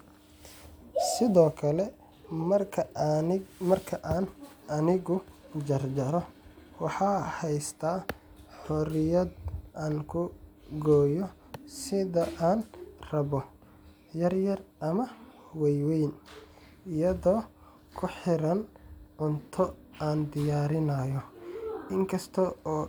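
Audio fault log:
No fault can be heard anywhere in the speech.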